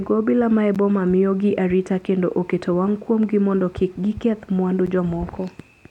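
At 0.75 s and again at 4.86 s, the playback path likely failed to deliver a buffer of speech in time, and each time a block of digital silence went out in its place. Both gaps last about 10.7 ms, which fits a 512-sample buffer. The signal drops straight to silence and returns with no fade, so the two hard edges merge into a single sharp tick rather than an audible hole in the speech.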